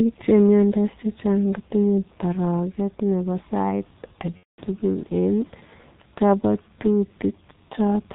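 A speech clip that sounds muffled and hoarse from start to finish, with nothing audible above about 4 kHz and consonants smeared into one another. That is the G.723.1 codec, an early internet-telephony coder that works in 30 ms frames at a very low rate, consistent with its 6.3 kbit/s mode. Its narrow band and slow-moving voice model make the damage heavy here, so fine detail in the voice never comes through. From 4.38 to 4.61 s the voice turns into a stretched sound that sags in level and then stays weak and distorted briefly after normal sound resumes. This is VoIP packet loss concealed by the speech codec. Packets went missing, roughly 210 ms' worth or about seven frames, and the decoder filled the gap by repeating its last pitch and filter with falling gain. Because each frame depends on the previous one, the recovery lags behind.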